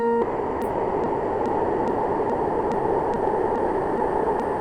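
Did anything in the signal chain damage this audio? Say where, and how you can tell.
Yes. At call processing and codec, the music drops out at 0.22 s and gives way to steady comfort noise until 4.59 s, about 4.4 s lost. This is sound dropped by the voice detector: it likely classed the music as background, so Opus DTX stopped sending.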